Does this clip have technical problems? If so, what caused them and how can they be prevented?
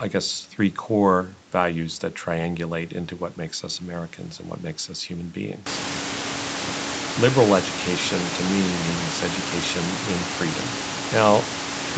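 No, there are no technical faults: the speech carries nothing above 8 kHz, as expected from the call's microphone processing and an Opus link limited to that bandwidth, and the room noise that rises by about 24 dB around 5.5 s belongs to the recording and stays about 10 dB under the speech.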